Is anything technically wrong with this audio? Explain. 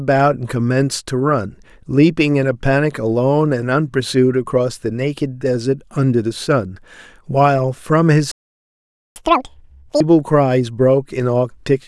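Yes, the speech stalls and then rushes to catch up.

From 8.32 s to 9.16 s there is a playback stall: the speech cuts out mid-flow into silence for about 0.84 s. The likely cause is the player running dry of data or its thread being blocked. Unlike a dropout, where audio briefly vanishes but the timeline keeps moving, nothing is lost here; the speech resumes exactly where it stopped.

From 9.16 s to 10.0 s comes catch-up at higher speed. To recover the lost time, the player resamples its backlog at 2.0 times normal speed, so the speech runs twice as fast and rises roughly ten semitones in pitch before snapping back to normal. A time-stretch error would change tempo alone, but here pitch and speed rise together, and the burst lasts just long enough to recover the stalled interval.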